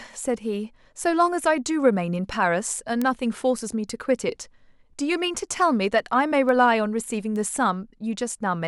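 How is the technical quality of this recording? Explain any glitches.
The recording has one clear problem: a steady train of word clock ticks running through almost the whole speech clip.

From about 0.42 s to 8.23 s there's a sharp tick roughly once a second, around ten in all. The receiving device is clocked on its own rather than locked to the sender, and the two clocks drift apart by something like 20 ppm. Each time they slip a full sample, one sample gets dropped or repeated, and that tiny discontinuity is the regular tick you hear.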